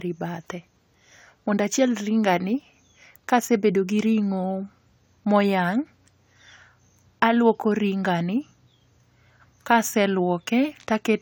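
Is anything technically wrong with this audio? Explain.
No, nothing here stands out as a technical problem; the speech comes across steady and intact the whole way.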